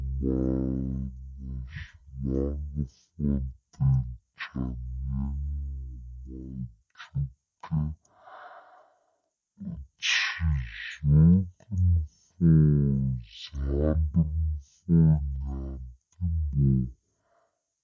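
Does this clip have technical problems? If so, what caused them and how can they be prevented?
Yes. Throughout the clip there is a wrong sample rate fault: the samples are being clocked out far slower than they were captured, with no resampling in between. Speed and pitch drop together, to about 0.36 times normal speed and roughly 17.6 semitones lower, so the speech sounds deep, dragged and heavily slowed. That ratio fits audio recorded at 44.1 kHz being played back at 16 kHz. To prevent it, pass the true rate through to playback, or resample to the device rate before output.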